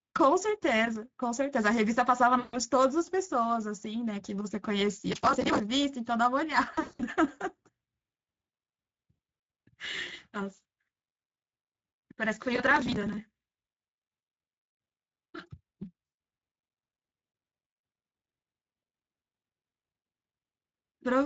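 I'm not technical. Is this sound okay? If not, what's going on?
No. The whole recording uses the Speex codec. It squeezes the speech hard, so it sounds hoarse and noisy throughout.

There is VoIP packet loss concealed by the speech codec at 2.39 to 2.58 s, 6.71 to 7.02 s and 16.05 to 16.17 s. Pieces of speech went missing, and the decoder filled the holes with a stretched, fading guess.

Processor overload crackle appears from 5.08 to 5.60 s and from 12.56 to 13.19 s. The computer kept missing tiny chunks of audio, which fits chunks of about 5 ms, and this makes a gritty crackling.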